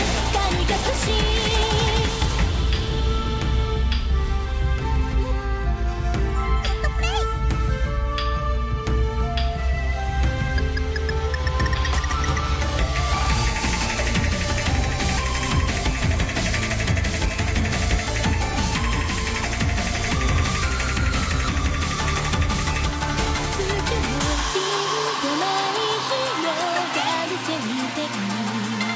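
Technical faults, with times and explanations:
No technical faults can be heard anywhere.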